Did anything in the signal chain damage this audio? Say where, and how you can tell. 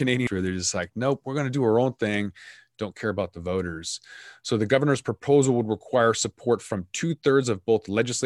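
Yes. Damaged data in a compressed stream, at the codec stage, from 0.27 to 0.30 s, just before "where they're just like". A brief glitch cuts the speech. Corrupted frames made the decoder lose sync and skip to the next valid header.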